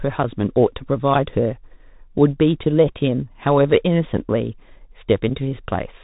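Right through the speech there's Bluetooth CVSD headset codec damage: nothing above 3.8 kHz, a grainy hiss underneath, scratchy s sounds, and loud bright bits breaking up as the one-bit steps can't keep pace.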